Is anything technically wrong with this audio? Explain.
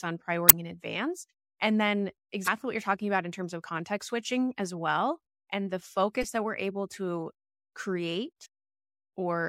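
Yes. Damaged data in a compressed stream breaks through four times in this speech, at 0.46 to 0.53 s before "in advance and then", at 2.44 to 2.48 s before "what you're talking about", at 6.22 to 6.24 s after "as well and the", and at 8.42 to 8.46 s. At each point corrupted bytes leave the decoder unable to read its frames, so it loses sync and hunts for the next valid header, producing a brief chirp or squawking blip.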